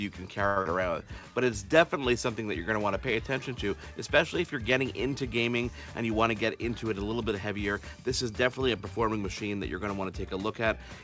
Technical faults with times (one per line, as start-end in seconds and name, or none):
0.47-0.59 short stall from a late packet
0.62-0.68 skip ahead
0.91-1.45 jitter buffer slow-down
5.95-7.75 jitter buffer speed-up